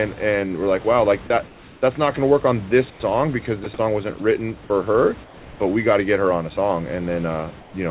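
Comfort noise in place of the background, 1.48 to 1.82 s, between "like wow like that" and "that's not going to": the real room background gives way to a steady, featureless hiss about 3 dB quieter, most likely because the sender went silent in the pause and the receiver synthesised noise to fill it. The same swap recurs at 2.9 to 3.0 s, about 5 dB quieter.

Sound dropped by the voice detector, 3.64 to 3.66 s, just before "song wasn't written for", and again at 4.18 to 4.2 s, between "song wasn't" and "written for her but": the sender's detector likely judged these brief stretches to be background and stopped transmitting. About 20 ms and then 10 ms of speech vanish under flat noise before the sound resumes.

Comfort noise returns at 5.24 to 5.6 s, about 2 dB down, and at 7.6 to 7.74 s, about 4 dB down. Each time, the textured background flattens into a smooth, slightly quieter wash. All of this sits within a narrow call band with nothing above 4 kHz.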